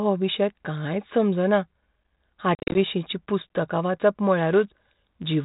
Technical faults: packet loss on an ADPCM call; block size mismatch (padded)

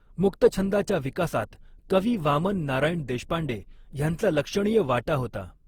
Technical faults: generation loss

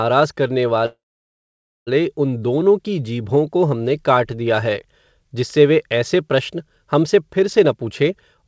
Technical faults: call audio freeze; jitter buffer speed-up

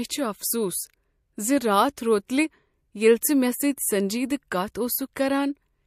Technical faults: pre-echo

